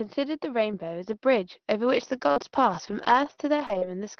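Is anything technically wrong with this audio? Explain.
Yes. From 2.15 to 3.87 s the speech turns choppy and robotic, with small pieces dropping out. This is repeated packet loss: five gaps, the longest 45 ms, about 160 ms missing in all. Each gap was patched by stretching the preceding sound over the call path, which keeps the audio within roughly 6 kHz.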